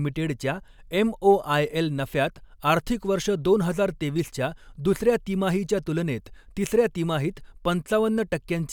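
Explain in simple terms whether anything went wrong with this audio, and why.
After "वर्ष दोन हजार", at 4.17 to 4.21 s, there's a quick chirp, squeak or burst of noise: a corrupt frame decoded, where damaged data in a couple of frames got played anyway.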